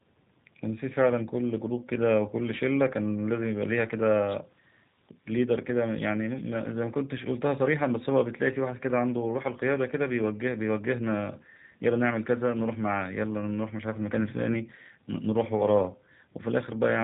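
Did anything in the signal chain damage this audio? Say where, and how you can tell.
Yes, at the codec stage: the whole speech clip carries plainly audible G.729 codec damage. Speech is intelligible but rough and synthetic, which fits an 8 kbit/s coder that discards the waveform and resynthesises each 10 ms frame from a vocal-tract filter, a pitch predictor and a few excitation pulses. On a spectrogram, energy stops at a hard ceiling near 4 kHz.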